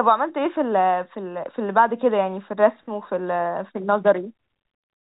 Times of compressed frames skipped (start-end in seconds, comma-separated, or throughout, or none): none